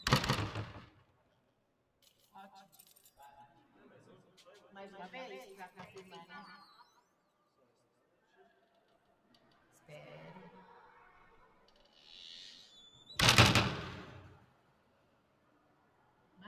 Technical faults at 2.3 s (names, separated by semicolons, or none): doubled audio track; noise suppressor applied to music or sounds